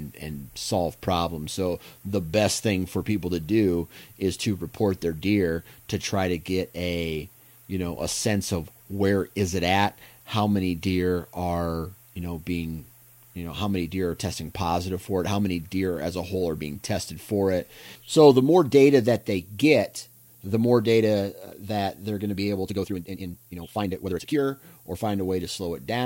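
From the start, the speech carries low bit depth with noise shaping: about 9 bits, with rounding error pushed upward, giving a steady thin hiss roughly 25 dB below the signal, brightest at the top. From 22.61 to 24.43 s, after "they're going to be", a time-stretched section runs at 1.95 times speed with unchanged pitch, rushed, likely from software squeezing that passage to fit.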